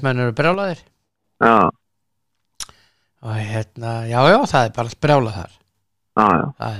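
From 0.54 to 1.24 s the speech level drops abruptly by about 6 dB and then snaps back, and the same step returns from 5.43 to 5.75 s. Nothing else changes, so the likely cause is one channel dropping out, halving the mono sum of identical channels.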